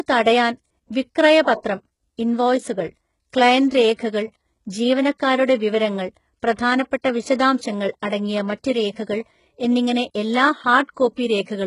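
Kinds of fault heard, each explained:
HE-AAC compression: The likely codec here encodes only the lower spectrum and rebuilds the treble by copying lower bands upward under a coarse envelope. The damage is heavy: nothing remains above about 11.1 kHz, and sibilance sounds gritty and metallic, which fits a very low bitrate near 12 kbps.
pre-echo: The transform codec spread its quantisation noise across a whole block, so noise sized for a sharp attack leaked into the quiet moment just before it. At 3.98 s a short hiss about 11 ms long precedes the onset and softens and smears it.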